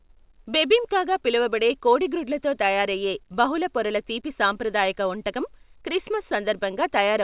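Nothing stood out on listening to this speech, which has nothing above 4 kHz, as fits a narrowband call codec such as G.711.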